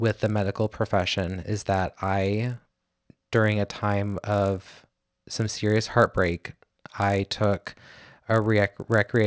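A resampler restarted on every block runs through the whole of this speech recording, from start to finish. The conversion was done one 20 ms block at a time, with no memory carried across edges, so every block boundary picks up a small discontinuity. At 50 per second those ticks merge into a low buzz that rides on the voice and drops away in pauses. The band-limited result points to a 48 kHz to 16 kHz conversion.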